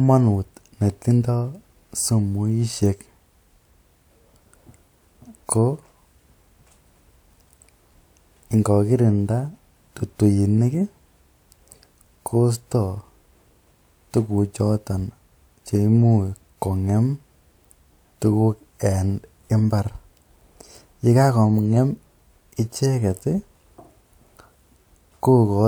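No technical faults can be heard anywhere in the recording. There is nothing in the speech at any moment that calls for a fault description.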